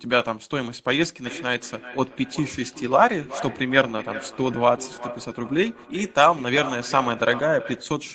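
From 1.26 s to 8.01 s, a feedback echo between two devices runs through the speech. A second device on the same call is replaying what this microphone sent, and the microphone picks that playback up again. Its echo canceller only removes sound its own device plays, so the returning audio passes straight through. Each stretch of speech comes back at a fixed interval of roughly 400 ms, reaching about 13 dB below the direct speech, over the call's microphone processing, which limits the audio to 8 kHz.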